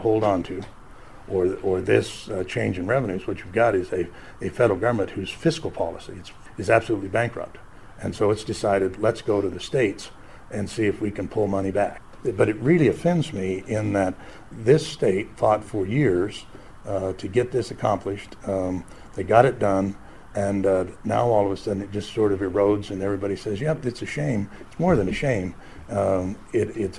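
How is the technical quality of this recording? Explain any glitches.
No glitches or technical faults can be heard here.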